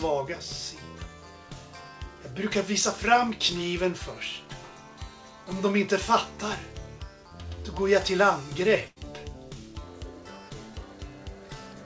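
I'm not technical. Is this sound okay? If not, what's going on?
No. At 8.88 to 8.98 s there is a burst of packet loss, where a run of audio data was lost in transit. The receiver papered over the gap by stretching and fading the last sound, so you hear a brief smeared tail, and about 80 ms of the original is skipped.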